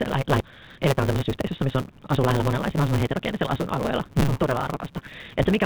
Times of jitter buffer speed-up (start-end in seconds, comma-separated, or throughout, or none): 0.46-1.68